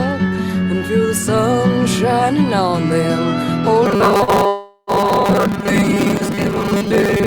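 Robotic sound from repeated short buffers, from 3.86 s to the end: a rigid metallic buzz at 200 Hz, likely from 5 ms buffers repeated in place of about half the real audio. Short concealed packet loss, 4.23 to 4.30 s: about 40 ms never arrived and was filled by extending the preceding sound, leaving a brief smear. Long network dropout, 4.47 to 4.90 s: roughly 0.4 s of audio was likely lost in transit, continued as a fading buzz or hiss that ends in 30 ms of silence before the sound resumes.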